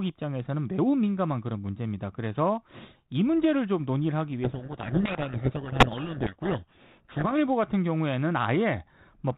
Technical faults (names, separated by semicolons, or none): codec payload misread